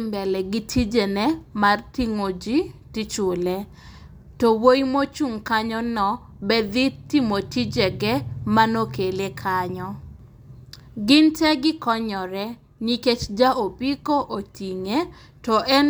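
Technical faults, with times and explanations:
No technical faults are audible.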